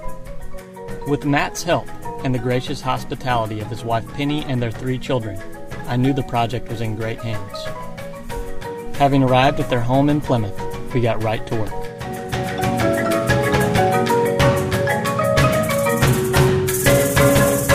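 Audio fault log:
5.78–8.52 s, crude rate conversion: the converter stretched the stream upward by a ratio that points to 44.1 kHz being turned into 48 kHz, filling the gaps by repeating the nearest existing sample instead of filtering. The repeated samples form a regular error pattern set by the two rates, sitting roughly 30 dB below the signal, and it lands as a gritty, inharmonic fizz that rides along with the louder and brighter parts of the sound.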